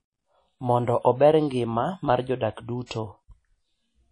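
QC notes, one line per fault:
Throughout: WMA compression. A transform codec, likely Windows Media Audio at a rate that fits about 32 kbps, coded the speech with long blocks and too few bits. Its quantisation noise spreads across each block and weak spectral lines are dropped, so the damage is plainly audible: a ringing, washy quality with hiss that swells and fades with the speech. Nothing is present above 10.1 kHz, which dulls the top end.
2.86–2.91 s: pre-echo. Just after "ober ngima mar jodak", a sharp attack falls late in a coding block. The encoder sized that block's noise for the loud onset but spread it evenly across the whole block, so it also fills the quiet moment before the attack. The result is a hiss of about 47 ms leading into the onset, which then sounds soft and smeared rather than crisp.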